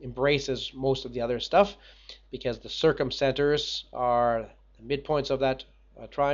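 No technical faults can be heard anywhere in the audio; the signal holds steady throughout.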